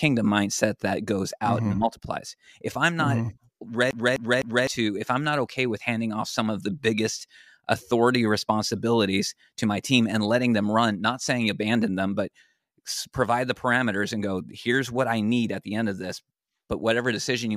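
From 3.91 to 4.67 s the playback gets stuck on one turn of the CD. A scratch knocks the laser back one track each rotation, so it keeps rereading the same spot. The speech turns into a rapid, even stutter: a fragment about 0.25 s long repeats three times, with a brief mute at each jump, before playback moves on into "if i'm not okay".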